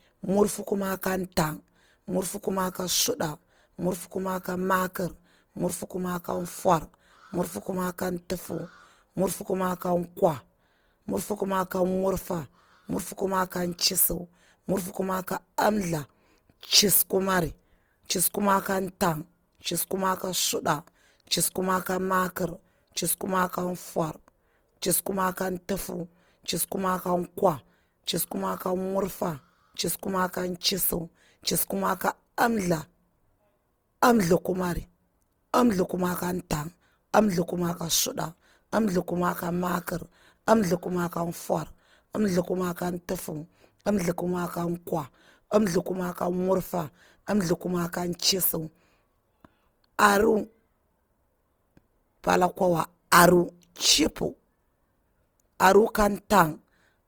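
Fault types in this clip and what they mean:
Opus compression: The audio was likely coded with Opus in its music (CELT) mode at a rate that fits 24 kbps, so starved bands are filled with folded or noise energy. The speech sounds plainly rough and grainy, though content still reaches about 20.2 kHz.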